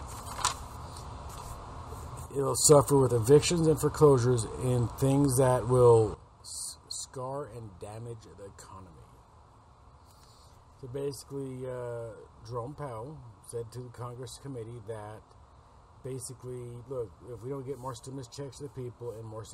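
At 2.26 s the level drops abruptly by about 7 dB and returns at 2.65 s, then at 6.14 s falls by about 14 dB and stays down to the end. Background noise steps with the sound. These are sudden gain jumps, likely from unramped digital gain changes.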